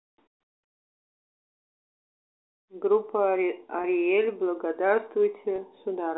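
Speech over what sounds like a G.711 phone line, with two short dropouts from packet loss with pitch repetition, at 3.82–3.84 s and 5.56–5.58 s. Each gap is about 20 ms, consistent with a single lost packet. The receiver fills it by repeating the last pitch period, so you hear a brief held, slightly buzzy blip before the speech picks back up.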